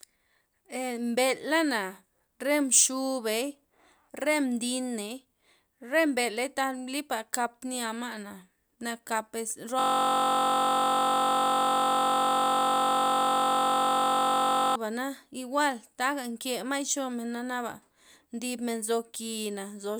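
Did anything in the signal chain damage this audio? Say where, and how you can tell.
Yes: a system hang loop at the driver or buffer stage, 9.79 to 14.76 s, where a 21.33 ms segment repeats exactly, fitting a 1024-sample buffer. It gives a steady 46.9 Hz buzz, not random dropouts.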